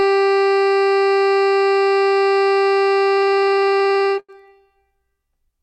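From 3.17 s to 4.31 s the music suffers repeated stalls (stutter): packets arrived late or too slowly, so the jitter buffer kept running dry, 21 times in just over a second. Each time the receiver stretched the last sound until data resumed, the longest hold lasting 90 ms and the holds adding 290 ms, about a quarter of that stretch. Unlike packet loss, nothing is skipped; the music drags and hiccups.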